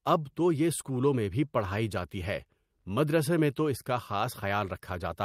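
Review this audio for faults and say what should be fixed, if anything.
No faults can be heard anywhere in this speech recording. Nothing needs to be fixed.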